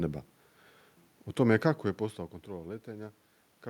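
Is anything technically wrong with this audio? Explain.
No, nothing stood out on listening to this speech clip; the background noise is simply the room the microphone was in, and the change in level around 1.5 s is the talker shifting position relative to the microphone.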